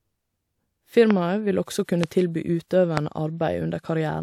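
You'll hear a loud pop at 1.11–1.13 s, then again at 2.04–2.06 and 2.97–2.99 s, each a single sharp hit about 15 to 20 dB above the speech, which keeps going underneath. It's likely a voltage pulse from a plug, switch, static or driver glitch.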